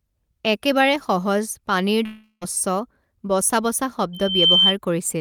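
At 2.05 s, right after "একেবাৰে সহজ পানীৰ", the speech breaks off until 2.44 s. This is most likely a long network dropout: the last sound is stretched into a buzzy tail for roughly 0.36 s, fading into about 60 ms of silence, and the speech resumes further on with that stretch missing. Unlike a brief packet-loss click, the gap is long, the fill decays, and the content skips rather than pausing.

At 4.13 s, after "বচা বচা", a loudspeaker feedback squeal appears at 3.1 kHz. The microphone is picking up the loudspeaker it feeds, and at that pitch the loop gain exceeds one. The tone builds on its own over about a third of a second and peaks at about 5 dB above the speech before stopping at 4.76 s. That self-driven swell at a single pitch sets it apart from a steady whistle or interference tone.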